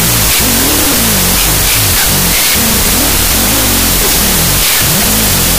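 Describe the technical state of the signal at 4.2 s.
At 4.2 s, as throughout, harsh loud noise buries the speech, which crawls at half speed an octave low. This is a wrong sample width: 32-bit float data read as 16-bit integers, splitting each sample into two garbled values that double the sample count.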